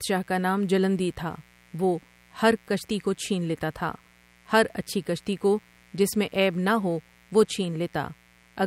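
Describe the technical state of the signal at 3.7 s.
At 3.7 s the speech carries a mains buzz, which runs through the whole clip rather than appearing at that moment alone. It is a steady, raspy buzz on a 60 Hz fundamental, sitting well below the speech at roughly 35 dB down. Sharp switching spikes from a dimmer, rectifier or unshielded path enter twice per mains cycle, so the hum carries a dense ladder of harmonics reaching several kilohertz.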